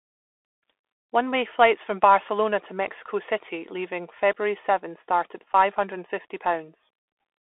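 From start to finish the speech carries a Bluetooth CVSD headset codec signature, consistent with a 64 kbps CVSD link. The one-bit delta modulator's adaptive step can't keep up with fast, loud high-frequency content. The band sits at roughly 300 Hz to 3.5 kHz, sibilants come out scratchy, and a grainy hiss runs beneath the speech.

At 5.54 s, right after "start at", there is an instance of unconcealed Bluetooth headset packet loss. About 7.5 ms of audio, a single packet's worth, never arrived, and nothing was interpolated to fill it. The result is a brief hard-edged gap, with the speech returning briefly quieter.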